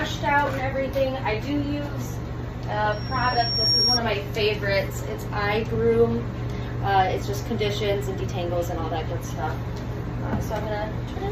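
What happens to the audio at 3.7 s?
A loudspeaker feedback squeal is sounding at 3.7 s; it runs from 2.92 to 4.0 s. A microphone is picking up the loudspeaker it feeds, and at one frequency the loop gain passes unity, so that frequency keeps reinforcing itself. Here it is a single piercing tone at 5.6 kHz that swells over roughly three-quarters of a second until it sits a few decibels above the rest of the sound, then cuts off at 4.0 s.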